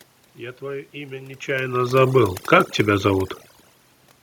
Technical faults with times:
0.00-4.23 overdone noise removal

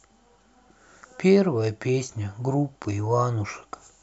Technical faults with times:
none

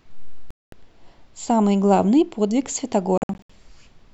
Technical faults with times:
0.51-0.72 Bluetooth dropout
3.18-3.50 Bluetooth dropout

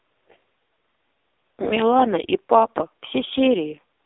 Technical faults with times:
0.00-4.05 AMR narrowband mobile codec

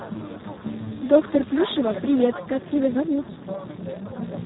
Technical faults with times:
0.00-4.46 Speex codec

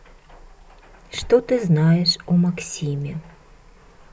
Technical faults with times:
none

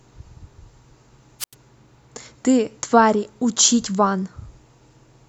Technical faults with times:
1.39-1.54 wireless microphone squelch dropout

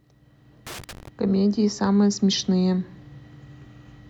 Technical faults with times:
0.67-1.08 loose connector crackle

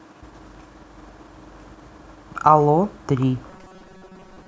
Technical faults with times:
3.50-4.48 robotic sound from repeated short buffers

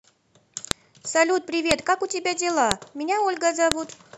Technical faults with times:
0.71 file header played as audio
1.71 file header played as audio
2.71 file header played as audio
3.72 file header played as audio

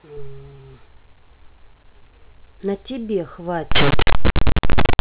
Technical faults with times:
3.71-5.00 linear audio read as companded

